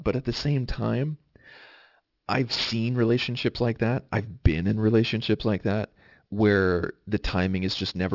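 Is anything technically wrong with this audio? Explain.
Yes. Aliasing runs through the whole clip. The audio sounds as if it was resampled to about 12 kHz without an anti-alias filter, so content above 6 kHz folds back below it as false tones. Sibilants sound gritty and metallic, with the folded energy roughly 20 dB below the speech.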